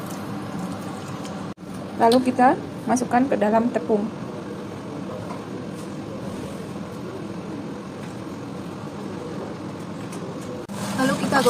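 No faults are audible anywhere in the clip.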